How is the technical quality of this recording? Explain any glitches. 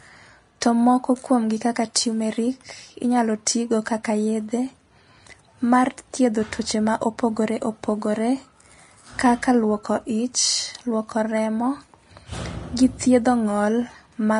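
The recording has one fault, present throughout. Nothing is heard above about 10.6 kHz, and the speech has a dull quality. This is likely low-bitrate audio saved at a high bitrate: a heavily compressed encode, re-saved as a larger MP3, which cannot restore the missing detail.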